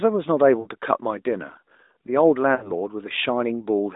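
Speech over a narrowband mobile line, band-limited to roughly 250 Hz to 3.7 kHz with light, clean-sounding AMR coding that fits the 12.2 kbps mode. It has two bursts of lost AMR speech frames, at 0.60–0.68 s and 2.56–2.72 s. Each sounds like about 60 ms of missing audio, roughly three frames. The decoder stretches the last good pitch and vocal-tract shape with falling gain, so you hear a smeared, fading warble before the voice picks back up, briefly thin.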